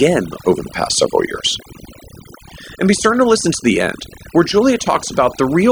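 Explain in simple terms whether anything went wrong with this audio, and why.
Overdone noise removal runs through the whole clip. A noise-cleaning tool was set too strong, so it switched off slices of sound it mistook for hiss, taking quiet parts of the speech too. The background drops and breaks up into twinkling specks.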